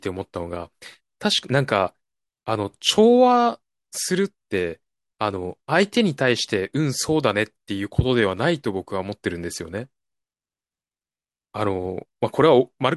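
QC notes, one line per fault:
No fault found in this speech clip.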